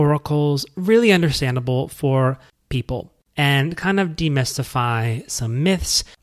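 No technical faults are audible in this speech.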